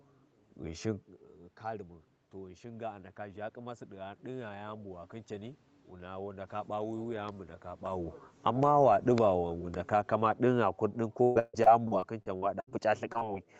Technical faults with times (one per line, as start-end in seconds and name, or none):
1.72-6.55 automatic gain rising
8.34-13.43 automatic gain falling
11.23-12.73 repeated packet loss (robotic sound)
13.13-13.23 short concealed packet loss